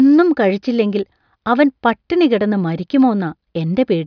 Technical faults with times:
none

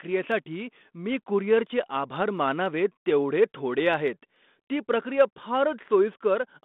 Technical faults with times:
0.10-6.63 clock slip clicks

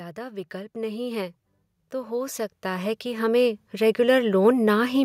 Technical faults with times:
0.14-5.00 automatic gain rising

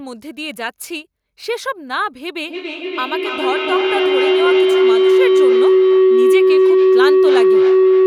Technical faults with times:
2.46-8.06 feedback howl

